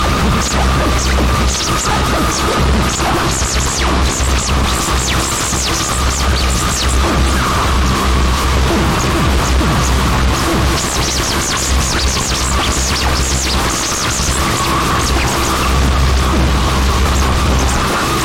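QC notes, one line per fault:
Nothing stood out on listening.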